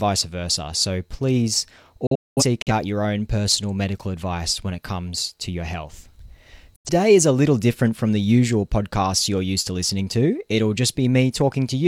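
Speech clip with two digital broadcast dropouts, where the receiver mutes with a 3 ms fade after corrupted or missing frames. From 2.07 to 2.72 s there are several short holes adding up to 0.3 s over 0.6 s, the longest 0.21 s, before "your own personal medical". At 6.76 s a single 85 ms gap lands just before "is a little different". What was sent during those holes is lost.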